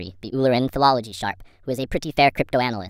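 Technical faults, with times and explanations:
Throughout, wrong sample rate: the speech plays 1.38 times too fast and 5.6 semitones too high, sounding hurried and squeaky. The samples are read out faster than they were captured, with no conversion, which fits 32 kHz audio played at 44.1 kHz.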